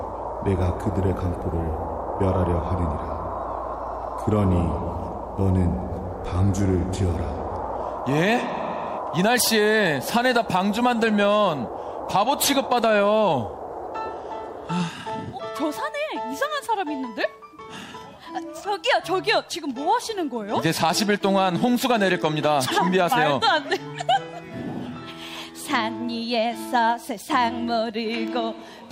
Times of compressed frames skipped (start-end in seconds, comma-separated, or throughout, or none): none